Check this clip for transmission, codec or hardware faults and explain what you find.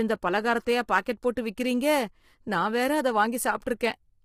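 One codec fault runs through the whole speech clip. Throughout, the voice sounds rough and grainy, with noise filling the gaps between harmonics; this is likely low-delay AAC compression, whose short frames blur pitch structure, and the heavy damage fits a bitrate near 24 kbps.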